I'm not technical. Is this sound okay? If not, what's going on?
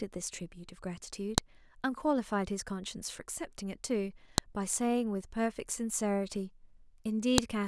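No. There are sharp clicks at 1.38, 4.38 and 7.38 s, every 3 s. This is a file header played as audio: each joined piece's header data sounds as a snap.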